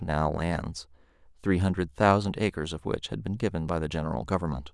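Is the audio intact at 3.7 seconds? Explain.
No. A sudden voltage pulse, likely from a switch or plug, hits the chain from 3.69 to 3.72 s, adding a single sharp pop roughly ten decibels above the speech, which carries on underneath.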